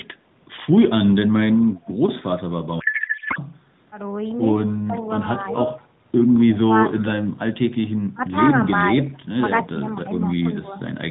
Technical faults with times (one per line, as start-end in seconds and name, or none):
2.80-3.39 codec payload misread
4.76-5.82 speech suppressed in double talk
6.93-7.12 speech suppressed in double talk
6.97-7.04 echo leak
7.83-7.89 echo leak
8.14-10.73 speech suppressed in double talk